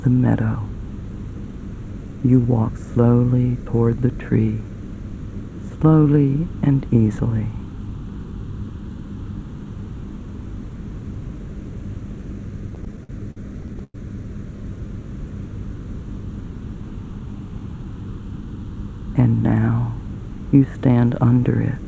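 From 12.70 to 13.96 s, repeated stalls (stutter): late packets drained the jitter buffer, so thirteen held sounds, the longest 104 ms, stretch the audio unevenly without losing anything.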